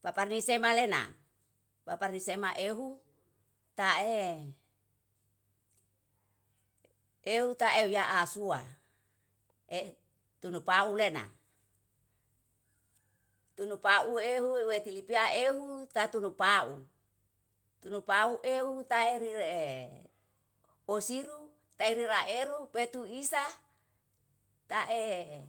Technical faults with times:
none

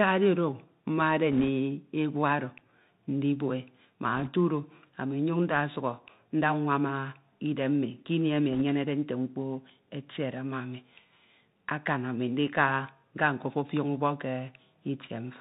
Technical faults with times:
0.00-15.40 Bluetooth CVSD headset codec
1.32-1.49 bit errors on a Bluetooth voice link
4.16-4.29 bit errors on a Bluetooth voice link
8.53-8.62 bit errors on a Bluetooth voice link

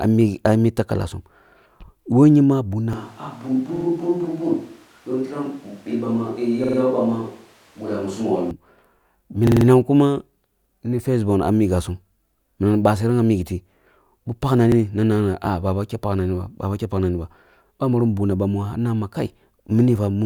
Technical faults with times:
2.93-8.51 switch to a distant microphone
3.76-3.85 repeated buffer
6.64-6.78 repeated buffer
9.47-9.66 repeated buffer
14.72-14.77 repeated buffer

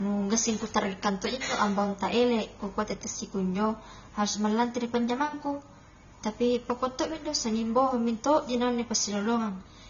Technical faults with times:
0.00-9.90 low-bitrate audio saved at a high bitrate

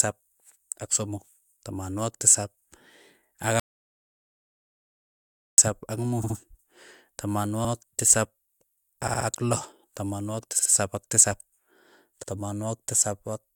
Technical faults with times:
2.60-2.64 repeated frames
3.60-5.58 audio dropout to silence
6.23-6.36 repeated frames
7.64-7.70 repeated frames
9.07-9.26 repeated frames
10.58-10.71 repeated frames
12.22-12.29 repeated frames

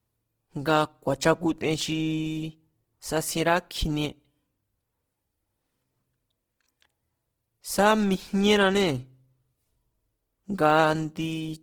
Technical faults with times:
0.00-11.62 Opus compression

